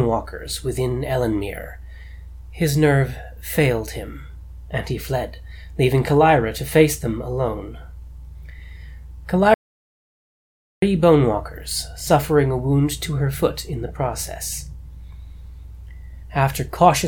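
At 9.54 s the sound stops dead. It does not fade. It returns abruptly at 10.82 s. That is an audio dropout to silence lasting about 1.28 s. The gap is silent, with no room tone or background hiss at all. Whatever happened during that stretch is missing. The likely cause is a brief loss of the input signal, such as a dropped connection or a momentary mute, while recording carried on writing silence.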